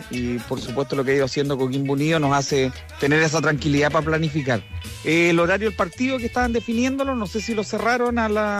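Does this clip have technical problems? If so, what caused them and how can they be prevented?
No, nothing in the signal path points to a technical fault, so there is no cause to trace and nothing to prevent.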